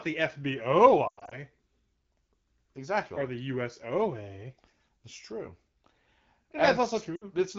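Speech with lost AMR speech frames at 1.07–1.38 s (longest run 100 ms) and 7.15–7.24 s: the decoder fades the last sound to near silence within two frames rather than clicking or cutting abruptly to silence.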